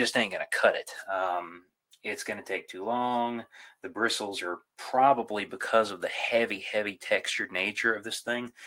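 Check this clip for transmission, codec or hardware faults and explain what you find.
Nothing to report: no transmission, codec or hardware fault is audible anywhere in the clip.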